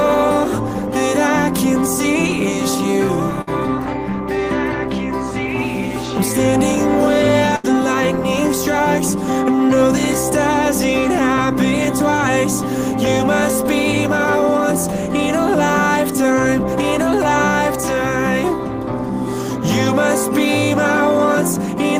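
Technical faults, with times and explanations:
3.41–3.49 s and 7.56–7.66 s, burst of packet loss. Consecutive packets never arrived in time, so the receiver covered each gap by extending the last sound and letting it fade. It lasts 57 ms at 3.41 s and about 78 ms at 7.56 s. Playback then jumps ahead, skipping 40 ms and 80 ms of audio. At 3.41 s, the timing also shifts by 17 ms.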